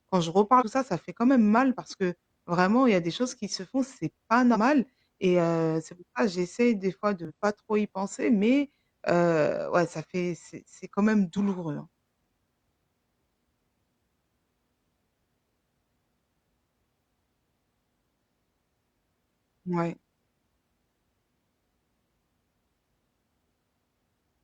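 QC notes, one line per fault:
0.56 to 0.63 s, 4.51 to 4.57 s and 7.25 to 7.31 s: damaged data in the compressed stream, heard as three short glitches of about 60 to 70 ms each. They land after "quand je" (before "ça ça fait quand"), after "se font c'est pas", and after "ça j'essaie des fois" (before "pas trop y penser"). The decoder hits corrupted frames, loses sync and hunts for the next good header, so you get a glitch in the speech.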